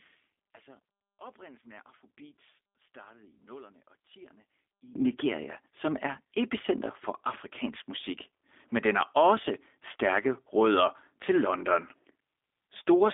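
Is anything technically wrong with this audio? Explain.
Yes, there are two faults.

Throughout the clip, the speech carries plainly audible G.729 codec damage. The line is confined to roughly 250 Hz to 3.6 kHz, with nothing at all above 3.7 kHz, which fits an 8 kbit/s G.729A voice codec. That codec does not store the waveform itself. It rebuilds each short frame from a vocal-tract filter, a pitch predictor and a handful of pulses, so the voice sounds muffled, slightly rough and synthetic.

From the start to about 4.95 s, the speech drops by about 21 dB and sounds faint, then returns to full level. The likely cause is one channel inverted in polarity. When the two channels are summed to mono, the content common to both cancels. The centred voice mostly disappears, leaving only the small difference between the channels as a faint residue.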